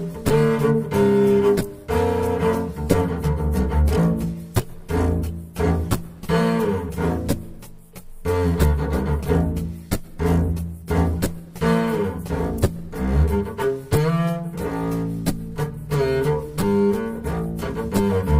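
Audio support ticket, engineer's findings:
Computer activity noise throughout, faint buzz/chirp riding under the sound, roughly 45 dB down, pulsing near 150 Hz. Processor or graphics load modulating shared audio ground. Spectrogram: comb of fine harmonic lines, switching on and off independently of program content.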